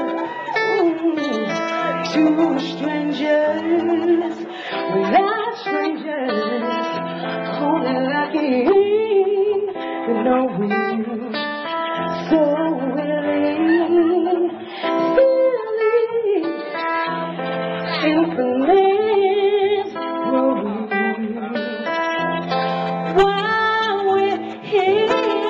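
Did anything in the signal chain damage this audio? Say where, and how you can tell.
Yes. At the network stage, an adaptive stream at a lower bitrate runs from 4.69 to 22.69 s. Quality drops suddenly with no gap. Codec artefacts rise and nothing remains above 5.9 kHz. That fits a fall from 128 to 24 kbit/s MP3.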